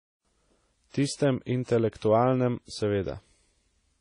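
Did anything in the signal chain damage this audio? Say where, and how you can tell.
Yes, at the codec stage, and it runs through the whole speech clip. Nothing comes through above 10.1 kHz, and the artefacts sound like two different codecs layered on each other. That points to transcoding between lossy codecs, likely a WMA encode at roughly 32 kbit/s re-encoded to AAC-LC at a similar rate. The second encoder spends its scarce bits on the first one's damage and adds its own, and the lower band limit stays.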